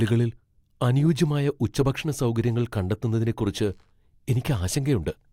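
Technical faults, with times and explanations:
No technical faults can be heard anywhere in the speech signal.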